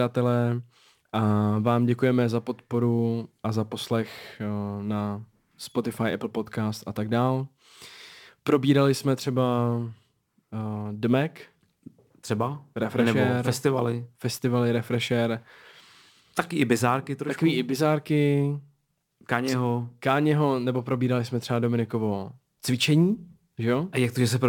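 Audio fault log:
Throughout: sample clock jitter, the converter clock wobbling by around 5 µs, leaving a gritty hiss about 30 dB down that swells on loud, bright speech and disappears in pauses.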